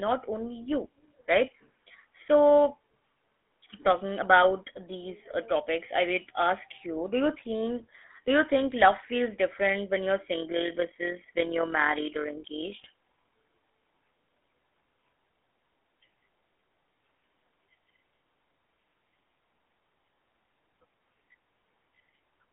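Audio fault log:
Throughout, GSM full-rate codec: the speech carries the plainly audible buzzy, gravelly roughness of the original GSM coder, which rebuilds the voice from a vocal-tract model excited by a sparse, regular pulse train rather than the true waveform, so fine detail of the excitation is lost. The band sits on a telephone line of roughly 250 Hz to 3.4 kHz, with nothing above 3.6 kHz, and the coarse, grainy texture fits a 13 kbps stream.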